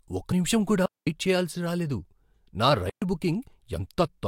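Compressed frames skipped at 0.31 s, just before "నిముషం కూడా": the decoder never plays a short stretch of the encoded speech, so the audio lurches forward by roughly 40 ms, a jump that fits about two lost frames. A small piece of the speech is simply absent.

Digital wireless dropout from 0.86 to 1.07 s, right after "నిముషం కూడా", and again from 2.90 to 3.02 s: the radio link lost too much data and the receiver muted itself, giving holes of about 214 ms and 123 ms. Each sounds like the speech being switched off with a very fast fade into near silence, with no hiss or crackle on either side.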